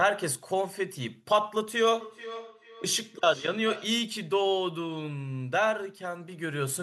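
Feedback echo between two devices runs from 1.94 to 4.09 s. A second device on the same call replays this speech, the first device's microphone picks it up again, and no echo canceller covers that path, so the sound returns roughly every 0.4 s, thinner and ringing, peaking about 13 dB below the speech.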